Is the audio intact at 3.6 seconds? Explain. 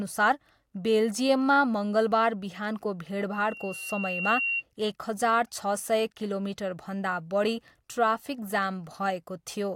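No. At 3.6 seconds a loudspeaker feedback squeal is under way: a single piercing tone at 2.8 kHz rises just after "बेल्जियममा मङ्गलबार बिहानको", swelling over about a second until it sits roughly as loud as the speech, and lasting from 3.33 to 4.63 s. It comes from a microphone picking up the loudspeaker it drives, so that at 2.8 kHz the loop gain exceeds one and the tone keeps reinforcing itself.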